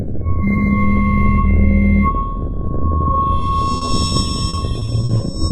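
At 3.77 to 3.83 s, then 3.85 to 3.89 s and 4.07 to 4.11 s, there is short concealed packet loss. Each time, a few tens of milliseconds of audio (40 ms in the first, 20 ms in the other two) arrived too late to decode. The receiver extended the preceding sound to cover the hole and then blended back, so each event is a brief smear or wobble rather than a silence. These are few and brief, which separates them from the next fault.

From 4.49 to 5.35 s the losses cluster into repeated packet loss, producing a robotic sound. The holes come one after another across this stretch, about 200 ms of concealed audio in all, roughly a quarter of the span, with the longest single gap 40 ms. Because each patch has barely faded before the next begins, the repairs merge into a choppy texture with pieces missing, rather than the single smears heard earlier.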